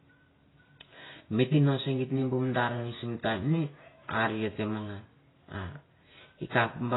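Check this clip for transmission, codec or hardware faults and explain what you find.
There's one fault, and it runs through the whole clip: heavy AAC compression is the likely cause, with a sound that fits a very low bitrate, around 16 kbps. The coder cut the bandwidth and quantised the spectrum coarsely, so nothing survives above about 3.9 kHz. The speech comes out dull and smeared, with a warbly, fizzy edge on sibilants.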